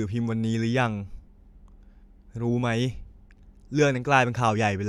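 Nothing goes wrong anywhere in this bit of speech, so there's no technical fault to point to at any moment.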